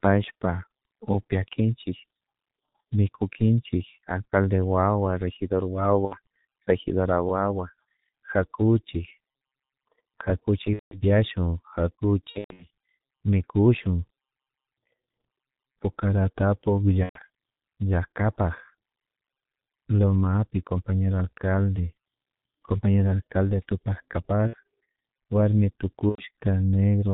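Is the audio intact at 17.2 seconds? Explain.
No. VoIP packet loss concealed by the speech codec runs from 17.03 to 17.19 s. About 120 ms is missing, which fits four lost 30 ms frames. The decoder stretches its last pitch and filter into a fading buzzy tone or coloured noise, muted from the third lost frame. Recovery lags past 17.2 s. Throughout, heavy G.723.1 codec damage at 6.3 kbit/s removes everything above 4 kHz, leaving speech muffled and hoarse with blurred consonants.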